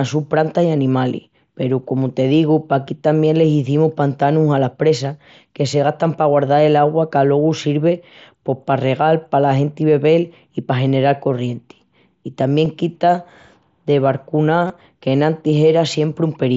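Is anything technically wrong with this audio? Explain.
Yes. Just after "corrienti I", at 12.65 s, there is a barely audible seam. At 14.67 to 14.70 s there is a short buzzy, steady tone with a slight warble as the speech returns. This is concealed Bluetooth headset packet loss: the receiver filled each lost stretch by repeating the best-matching recent waveform. The first gap is brief, about 7.5 ms. The second run is about 23 ms, which fits three lost frames.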